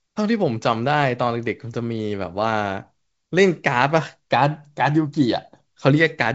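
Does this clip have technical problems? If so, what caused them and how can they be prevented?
No, there are no technical problems to report here.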